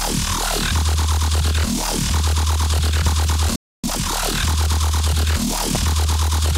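At 3.07 to 3.09 s a single sharp loud pop, roughly 10 dB above the sound, sits on top of the audio, which continues beneath it. This is likely a sudden voltage pulse from a switch, plug, static or driver glitch entering the signal path. From 3.56 to 3.84 s the sound cuts to silence for about 0.28 s, a playback stall, likely because the player ran short of data or its thread was held up. Once it resumes, 3.84 to 4.10 s rushes past at double speed with unchanged pitch. This is time-compressed catch-up, where the player trims small slices and cross-fades them to clear its backlog. A second loud pop of similar strength lands at 5.75 to 5.78 s, likely another brief electrical pulse added to the signal.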